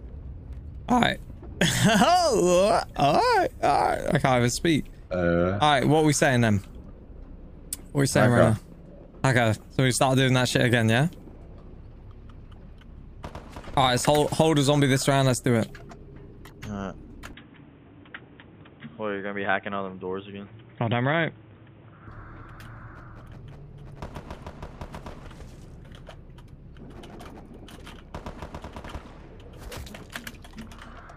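From 17.33 s to 22.08 s the sound narrows abruptly, with nothing above 3.8 kHz and a new noise floor about 35 dB down, then returns to full band, with no gap and no real level jump. This is likely an input switched to a poorer device.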